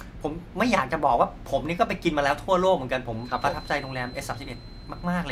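From 3.11 s to the end of the speech, a feedback whistle sits behind the voice: a thin, steady tone at 4.1 kHz, about 25 dB below the speech, swelling and fading slowly in level. The likely cause is a loudspeaker-to-microphone loop held just at the edge of feedback, sustaining one frequency without building up. On a spectrogram it shows as a single unbroken horizontal line at 4.1 kHz; the waveform barely changes, since the tone is so much quieter.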